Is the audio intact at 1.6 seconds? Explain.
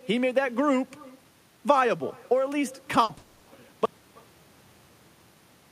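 No. At 1.6 seconds, as across the whole clip, there is echo with no canceller: the far end plays the call through a loudspeaker, its microphone picks it up, and nothing strips that pickup before it returns. The speech therefore comes back after the network round trip, roughly a third of a second late and about 25 dB down, so each syllable is trailed by a faint, thin copy of itself.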